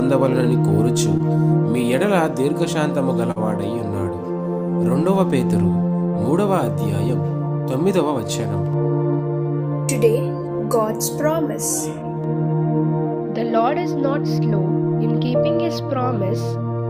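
At 1.17–1.21 s and 3.31–3.38 s, short concealed packet loss: missing audio was synthesised from preceding sound, heard as brief smears, showing as smoothed, repeated spectral texture.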